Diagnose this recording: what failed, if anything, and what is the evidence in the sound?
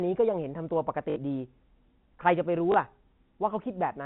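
The network stage dropped packets, and the receiver concealed each gap by replaying the last good packet. At 1.10 to 1.16 s the stutter lasts 60 ms and buzzes at 50 Hz, which fits three 20 ms packets. At 2.72 s a shorter 20 ms repeat makes a small blip over the narrowband G.711 sound.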